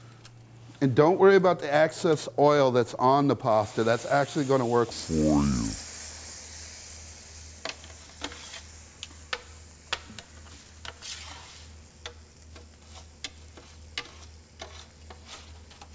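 From 4.91 s to the end, a wrong sample rate: the audio is being clocked out slower than it was captured, without resampling, which fits 24 kHz material played at 16 kHz. Everything runs at two-thirds speed and drops about 7 semitones, sounding low and dragged.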